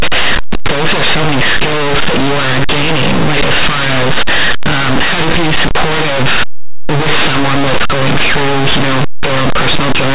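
Linear audio read as companded runs throughout: plain 8-bit samples decoded as mu-law push values just on one side of zero to the largest outputs, while those on the other side stay small, producing harsh, loud distortion.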